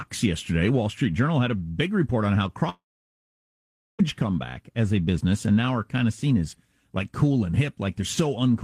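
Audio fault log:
2.69 to 4.01 s, long network dropout: speech smears into a fading buzz, then 1.2 s of silence and 1.3 s lost, likely packets that never arrived.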